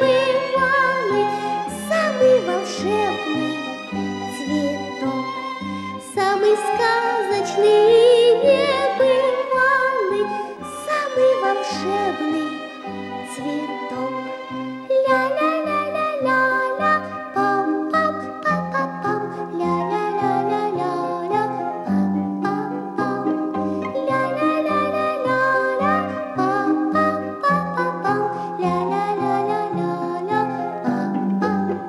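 Compressed frames skipped at 10.57 s: whole encoded frames never reach the output, so the audio leaps forward by roughly a tenth of a second.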